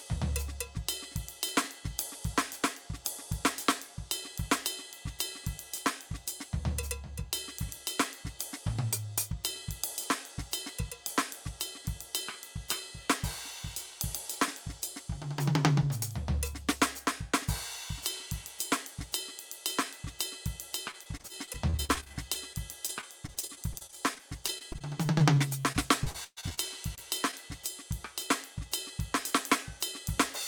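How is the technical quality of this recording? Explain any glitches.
The music has clear network-transmission damage in its later part: a long run of repeated dropouts, followed by two isolated brief ones.

From 20.91 to 26.59 s there is repeated packet loss with a robotic sound. About 45 gaps occur, totalling roughly a second of lost audio, the longest 123 ms. Each is patched by extending the preceding sound, so about 18% of the stretch becomes choppy imitation. The losses come back to back rather than singly.

At 26.95–26.99 s and 27.31–27.34 s there is short concealed packet loss. Each time about 20 ms failed to arrive and was filled by continuing the last sound, then blended back. These are isolated, giving a brief smear or wobble instead of a sustained robotic texture.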